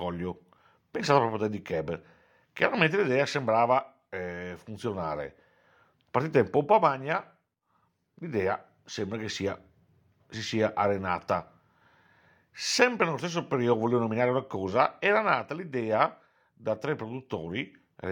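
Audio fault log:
No technical faults can be heard anywhere in the speech recording. Nothing in the audio calls for a timed entry in this log.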